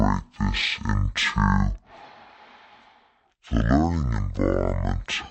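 Throughout, the speech plays at half speed and a full octave low. This is stereo read as mono, with interleaved left and right samples taken as one channel. Unlike plain slowdown, it leaves a faint mirrored image higher up.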